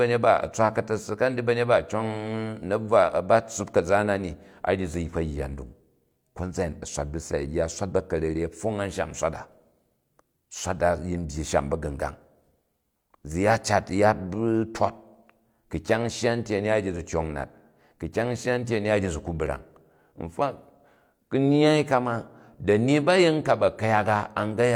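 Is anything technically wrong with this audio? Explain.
No, nothing technically wrong turns up anywhere in this speech recording, so there's honestly nothing to flag here.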